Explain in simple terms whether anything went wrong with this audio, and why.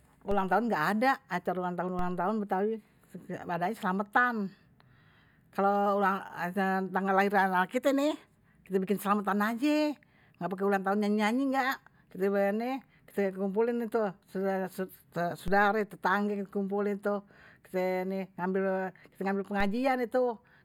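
A DC step occurs four times, at 0.31, 1.99, 15.48 and 19.60 s. Each time, the silent centre line the waveform swings around suddenly jumps to a new level. That abrupt shift is heard as a short, low thump or click, while the speech carries on unchanged. The offset doesn't stay put. A very low filter, around 2 Hz, gradually pulls the line back to centre within about a second.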